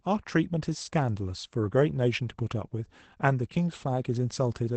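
From start to finish, the speech has passed through Opus voice compression running in its SILK linear-prediction mode at a wideband setting, at a rate that sounds like about 12 kbps in 20 ms frames. At that rate the coder keeps only the band below 8.6 kHz and models the excitation coarsely, so the speech is dull and muffled, with a plainly audible hoarse, slightly robotic grain throughout.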